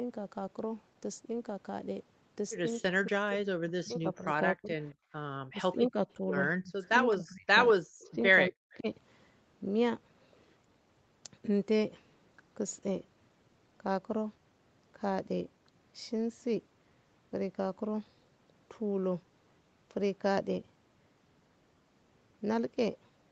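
From 2.86 to 4.77 s the speech sinks and breaks apart, falling by around 40 dB for roughly one and a half seconds in total. This is likely speech suppressed in double talk: with both sides talking at once, the echo canceller could not tell the near talker from loudspeaker echo and turned both down. The same dips return at 5.51 to 6.22 s (about 20 dB), 6.61 to 6.81 s (about 35 dB), 7.15 to 8.11 s and 8.5 to 8.88 s (about 40 dB each).

At 5.05 to 5.13 s the room tone briefly ducks by about 19 dB and then comes back. This is background gated by the echo canceller, which clamped the microphone while the loudspeaker was playing and released it a moment later.

From 8.03 to 8.12 s a faint scrap of the voice trails 205 ms behind, about 30 dB below the speech. This is likely an echo leak: loudspeaker sound that reached the microphone slipped past the canceller and was sent back.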